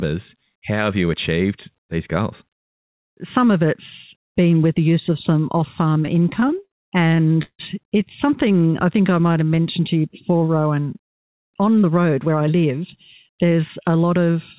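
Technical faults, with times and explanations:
5.94–6.73 s and 7.09–7.61 s, repeated stalls (stutter): right after "use of some off" the stream keeps stalling, ten short gaps and then five more, the longest about 164 ms, each papered over by stretching the last sound. Packets were arriving late and the jitter buffer kept running dry. Nothing's actually lost, but it drags and stutters.
8.47–9.80 s, jitter buffer slow-down: leading into "to you before" the sound runs at about 89% speed, with roughly 157 ms added by repeating single pitch periods over and over. The buffer was topping itself up, so things get drawn out while the pitch stays put.
11.76–12.85 s and 13.29–14.11 s, jitter buffer speed-up: here it goes the other way, about 111% and then 108%, trimming roughly 150 ms and then around 70 ms by dropping tiny pitch-period chunks. The buffer had too much queued and was cutting delay, so it sounds a bit hurried at the same pitch.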